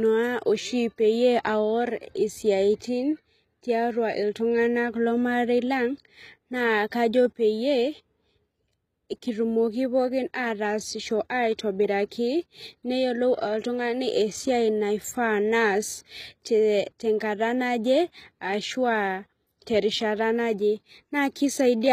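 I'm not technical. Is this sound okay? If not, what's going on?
No, the speech carries plainly audible compression damage from start to finish, most likely HE-AAC compression. This format stores only the lower part of the sound in detail and fakes the treble by copying lower bands upward. Here nothing exists above about 14.9 kHz, and the rebuilt top end doesn't line up with the real voice, so s sounds come out gritty, metallic or slightly lisped, and the brightness sounds artificial rather than natural.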